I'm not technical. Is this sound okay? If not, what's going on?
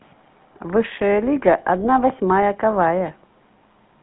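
No. The speech went through the GSM full-rate codec, the old mobile-phone system that rebuilds a voice from a simple model driven by regular pulses rather than keeping the real sound. That happens for the whole clip. The result is a buzzy, gravelly roughness that is plainly audible, and the sound is squeezed into a narrow phone band, roughly 150 Hz to 3.6 kHz, so it sounds thin and muffled, with no deep bass or crisp top.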